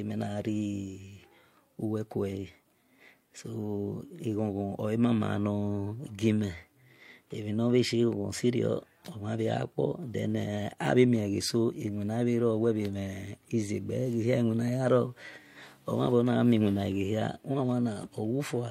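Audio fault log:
Nothing stood out on listening to this speech recording.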